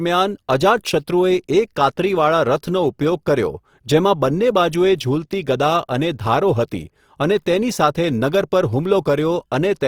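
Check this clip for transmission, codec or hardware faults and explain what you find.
One fault runs through the whole speech clip. Throughout, the sound is grainy and rough, plainly audible Opus compression, likely in CELT mode at a bitrate near 24 kbps. The encoder keeps each band's energy but fills starved bands with folded or noise content. A spectrogram shows few holes, smeared noisy texture replacing fine harmonics, and content up to about 20.2 kHz.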